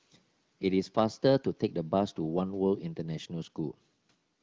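No technical faults can be heard in this speech.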